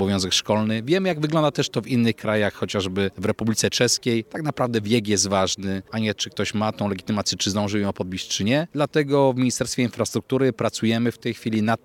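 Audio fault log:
No faults are audible anywhere in this clip.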